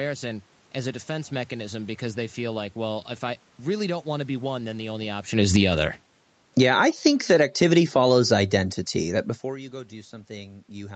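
Just after "one then the only", from 5.24 to 5.74 s, automatic gain falling pulls the level down by about 9 dB. The control reacts as if the input were too loud, so speech and room noise sink together. On the waveform the envelope tapers evenly, and the spectrogram dims across all bands at once. From 5.65 to 6.12 s, automatic gain rising raises the level by about 6 dB. Voice and background swell together, seen as a brief brightening band in the spectrogram and a widening waveform. A second, slower automatic gain falling runs from 6.45 to 8.83 s, lowering everything by about 6 dB before "that before you go". The waveform shrinks gradually over more than two seconds.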